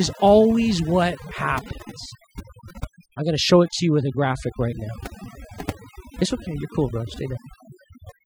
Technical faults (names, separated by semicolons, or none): overdone noise removal